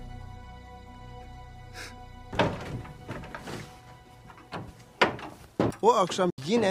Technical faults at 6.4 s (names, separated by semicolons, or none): Bluetooth dropout